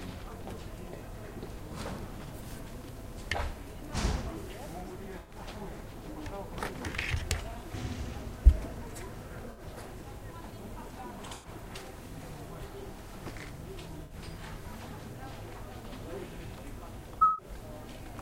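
A recording of everyday sounds with five short soft-edged holes or smears, at 5.19 to 5.34 s, 9.51 to 9.61 s, 11.32 to 11.50 s, 14.04 to 14.14 s and 17.19 to 17.46 s, each lasting between 0.10 and 0.27 s. This is corrupt frame concealment: damaged AAC frames were detected by the decoder, which covered each gap by muting it or by filling it with a sign-scrambled copy of the last good spectrum, with lengths that fit runs of a few frames.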